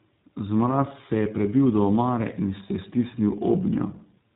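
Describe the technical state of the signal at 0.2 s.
At 0.2 s the speech carries tandem speech coding, present throughout: iLBC re-encodes the already degraded output of GSM full rate, giving rough, warbly sound and a spectrogram empty above 3.8 kHz.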